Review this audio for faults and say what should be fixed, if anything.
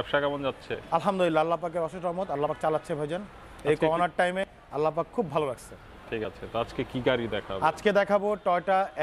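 Four sudden jumps in the sound occur at 2.49, 3.65, 4.44 and 6.25 s, with no gap of silence. The one at 4.44 s skips further, around 70 ms, while the others each lose roughly 20 ms. This is likely a dropped buffer (overrun): the capture software fell behind, the hardware overwrote unread samples, and the surviving audio was spliced together. Prevent it with larger capture buffers or higher priority for the recording thread.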